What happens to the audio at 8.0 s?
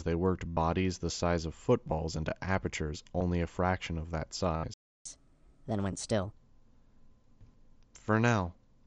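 Nothing goes wrong at 8.0 s; the audio is intact there, still carried through the Bluetooth mSBC headset codec with its light, grainy wideband character.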